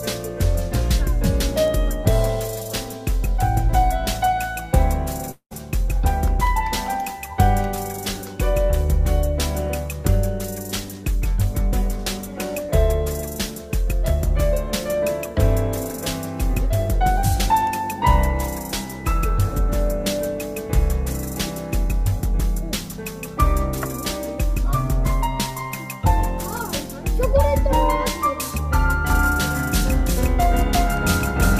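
A long network dropout at 5.31 to 5.53 s leaves a fading buzz, then silence, before the sound resumes with a fifth of a second missing, likely from lost packets.

A doubled audio track runs from 29.10 s to the end, with an equally loud dry copy trailing by roughly 0.4 s, likely a second, slower capture path.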